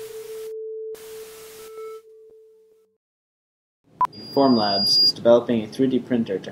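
At 4.12 s a loudspeaker feedback squeal kicks in and runs until about 5.13 s. The mic is clearly hearing the speaker it feeds, and at around 4.8 kHz the loop gain tips over one, so that frequency keeps feeding itself. You get a thin, piercing tone swelling over roughly a second until it sits a few dB above the rest of the sound, and then it stops.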